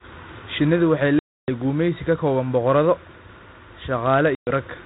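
Hard-edged silent gaps cut in at 1.19 to 1.51 s, before "gumeysi ka kooban boqorado", and at 4.35 to 4.51 s, with the sound resuming slightly distorted. This is packet loss on an ADPCM call: lost packets became silence, and the decoder's adaptive predictor and step size drifted from the sender's, taking tens of milliseconds to resettle.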